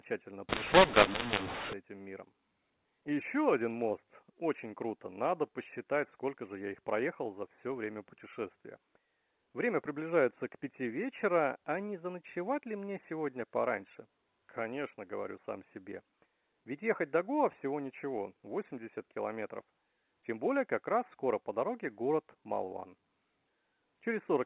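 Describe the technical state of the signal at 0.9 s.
At 0.9 s the speech is inside a mu-law and A-law mix-up running from 0.49 to 1.73 s, ending just before "этим миром". A-law telephone samples are being expanded with the mu-law curve, scrambling levels and lifting quiet passages into harsh noise. Ordinary G.711 quantisation noise stays faint and tracks the signal level.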